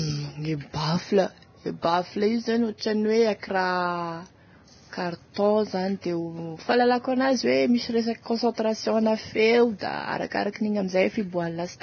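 Vorbis compression, heard throughout the speech: nothing is present above 6.5 kHz, and the remaining treble has a hissy, grainy texture, with roughened tones and smeared consonant attacks. The damage is heavy and points to a very low bitrate of roughly 18 kbps. The likely cause is the encoder lowering its cut-off and quantising the upper band so coarsely that fine detail turns into noise of similar energy over a smooth spectral floor.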